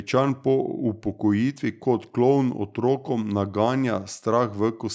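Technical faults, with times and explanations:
No technical faults are heard in this speech clip.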